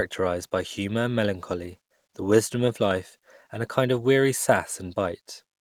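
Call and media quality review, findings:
No faults identified in the speech signal; the capture and playback path presents no audible technical defect for this ticket.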